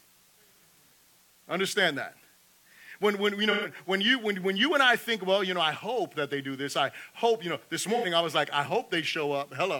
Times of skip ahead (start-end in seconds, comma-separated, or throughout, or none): none